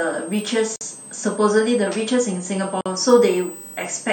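Running under the whole thing there's a switching supply whistle, a thin high tone wandering between about 7.9 and 8.6 kHz. It sits roughly 20 dB below the speech. It's what you get when a switching power supply drops into an audible burst mode or beats against another one, and the pitch moves because the load on the supply keeps changing.

Then at 0.76 s the speech just drops out for about 50 ms, until 0.81 s. At 2.81 s it happens again for about 48 ms, ending at 2.86 s. That's a gap at a join of encoded pieces. The two dropouts are 2.0 s apart, which points to the audio being encoded in 2-second chunks and joined without trimming. Each encoder run leaves its start-up delay and last-frame padding in place, and that shows up as silence. The codec smears the edges, and the speech resumes exactly where it stopped.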